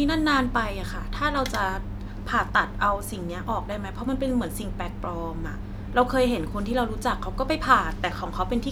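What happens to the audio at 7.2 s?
Nothing goes wrong at 7.2 s; the speech carries on intact through that moment.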